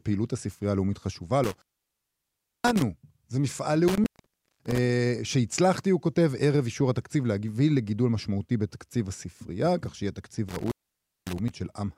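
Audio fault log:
1.44–2.82 s, 3.88–4.78 s, 10.49–11.49 s, intermittent contact: the speech drops out abruptly with crackle at each edge, leaving only faint hiss for about 1.03 s, 0.54 s and 0.55 s, as a loose cable or plug briefly opens the signal path.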